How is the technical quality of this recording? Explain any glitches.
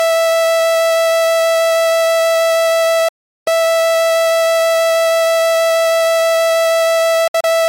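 The recording has two digital broadcast dropouts, where the receiver muted on corrupt or missing frames. At 3.08 to 3.48 s the sound fades out in about 3 ms and goes silent for 0.38 s. From 7.28 to 7.47 s it breaks into two short holes, the longest 64 ms.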